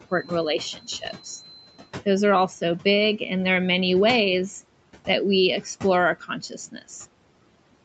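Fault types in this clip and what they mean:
Noise suppressor artifacts: The suppressor lowers bands it takes for steady noise, by about 18 dB, so the background sinks between phrases and rises under speech. On a spectrogram the noise floor looks patchy and flickering throughout.
Feedback whistle: A thin, steady 4.1 kHz tone sits around 20 dB below the speech from 0.0 to 2.0 s, swelling and fading slowly in level, likely from a loudspeaker-to-microphone loop held just short of runaway. A spectrogram shows one narrow horizontal line.
Speech cut by the noise suppressor: The suppressor mistook parts of the speech for noise and turned them down: 0.76 to 1.03 s by up to about 11 dB, 1.24 to 1.88 s by up to about 19 dB, and 6.2 to 6.9 s by up to about 17 dB, leaving swallowed syllables. These show as sudden dips in the waveform envelope.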